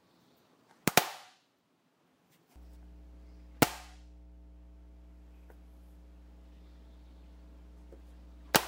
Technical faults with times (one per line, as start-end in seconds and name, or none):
2.56-8.68 mains hum